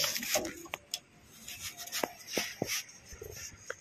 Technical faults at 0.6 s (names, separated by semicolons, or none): compressed frames skipped